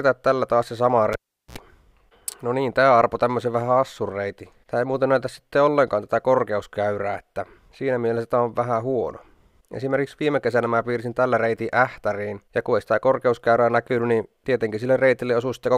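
A cable pulled and plugged in disrupts the sound from 1.13 to 1.58 s: a pop, about 0.40 s of near silence, a 71 ms burst of 60 Hz mains buzz as the tip makes contact, then another pop. The waveform shows spikes framing a flat gap; the spectrogram shows vertical broadband lines and stacked hum harmonics.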